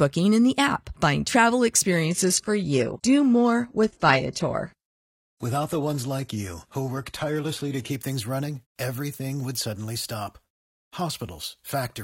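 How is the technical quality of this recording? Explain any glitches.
The recording has one glitch. From 1.91 to 7.91 s, just before "things running everything would", an adaptive stream at a lower bitrate takes over. The connection slowed, so playback switched to a leaner encode, which fits a move from full-rate AAC to a low-rate HE-AAC stream. Nothing remains above 12.4 kHz, and the upper treble turns thin. Quality drops and returns abruptly with no silence, which separates it from a dropout or packet loss.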